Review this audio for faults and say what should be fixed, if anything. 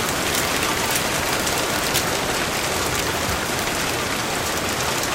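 Integer overflow is audible at 0.09–0.97 s, 1.33–1.98 s, 2.57 s, 3.59–3.62 s and 4.73–5.03 s, with the signal driven roughly 6, 10, 3, 1 and 6 dB past full scale. Each peak that exceeds the integer range wraps to the opposite sign, producing harsh cracks far sharper than clipping, worst in the 1.33 s passage. Fix it by using saturating arithmetic or a limiter before conversion so excess peaks clamp instead of wrapping.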